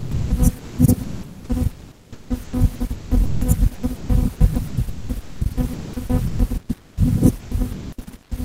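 From 0.00 to 0.30 s and 0.58 to 0.78 s, sound dropped by the voice detector: speech, likely misjudged as background by Opus DTX, gives way to comfort noise in a single clean gap.

Sound chopped by the voice detector follows at 1.03 to 3.41 s, 3.74 to 4.09 s, 4.36 to 6.97 s and 7.39 to 8.31 s. The detector likely toggled repeatedly, so the sound has repeated holes filled with comfort noise, rather than giving way once.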